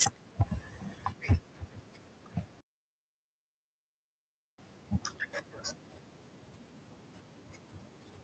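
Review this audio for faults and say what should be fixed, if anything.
Microphone overload at 0.01–0.04 s, 0.40–0.42 s and 1.30–1.35 s, peaking about 8, 4 and 8 dB over: flattened crests give harsh crackle on loud syllables. Unlike codec noise, it tracks loudness. Likely cause: input gain set too high. Lower the microphone gain so peaks stay below full scale.

Microphone volume stepped down at 0.03 s by about 3 dB: speech and background drop together in one step right after the first distorted peak, unlike a gradual fade. This likely comes from the call software reacting to the clipping. Setting the gain correctly from the start removes the need for that correction.

Playback stall from 2.61 to 4.58 s, 1.98 s of silence mid-flow. Unlike a dropout of only a few milliseconds, the sound halts fully and then resumes, likely because the player ran out of data or its thread was blocked. Give the playback path more buffering and keep its audio thread free of blocking work.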